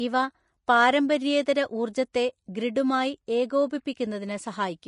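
Throughout the speech, the encoder has likely run at a low Vorbis quality setting, with Vorbis compression squeezing the signal into very few bits. That leaves nothing above 10.5 kHz and treble quantised so coarsely that its fine detail turns into noise of similar energy. The damage is plainly audible: a hissy, grainy upper range, roughened tones and softened consonant attacks, consistent with a bitrate somewhere near 33 kbps.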